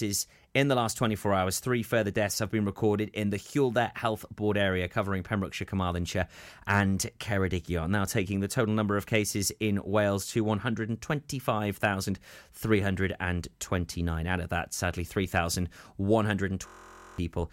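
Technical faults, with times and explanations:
16.67–17.18 s, system hang loop: the system froze while the hardware replayed one 23.22 ms slice 22 times, which fits a 1024-sample buffer. About half a second of speech becomes a steady 43.1 Hz buzz, seen as identical repeating waveform cycles and evenly spaced horizontal spectrogram lines.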